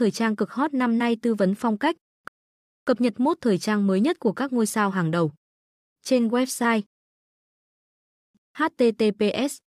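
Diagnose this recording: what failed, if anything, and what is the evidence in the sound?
The speech drops to dead silence twice, from 2.28 to 2.87 s, after "tư vấn phong cách" and resuming on "cập nhật mốt thời", and again from 6.86 to 8.35 s, picking up exactly where it stopped. This is a rebuffering stall at the playback buffer: the player exhausted its downloaded audio and waited, adding 0.59 s and 1.48 s without losing any content.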